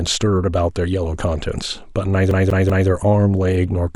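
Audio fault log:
2.31–2.89 s: CD stuck on one turn. The same 0.19 s slice of speech plays three times in a row, with a brief mute at each jump. A scratch throws the laser back one track at the same spot every revolution, producing a fast, even stutter.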